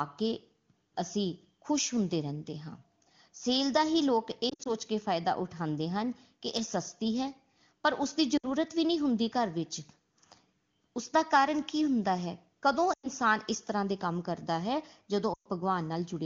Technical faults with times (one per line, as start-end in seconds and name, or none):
4.49-4.73 lost AMR speech frames
8.37-8.52 lost AMR speech frames
12.93-13.09 lost AMR speech frames
15.33-15.47 lost AMR speech frames